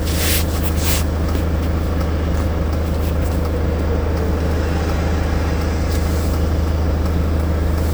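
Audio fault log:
No fault is heard anywhere in this audio. There is nothing to log.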